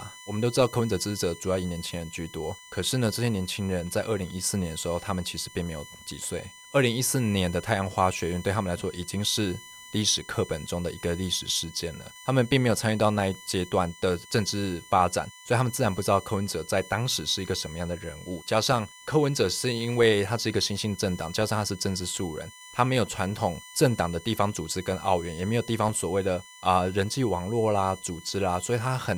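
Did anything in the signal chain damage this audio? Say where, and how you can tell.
Yes. The damage is in the analogue wiring: current drawn by a USB device in regular 1 ms frames is leaking through a shared power or ground path into the audio input. You can hear it as a USB whine of fixed pitch running under the speech for the whole clip. It is built on 1 kHz and is strongest at its 2 kHz multiple, sitting roughly 20 dB below the speech.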